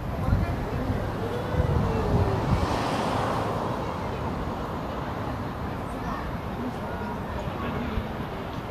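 No technical faults can be heard anywhere in the audio.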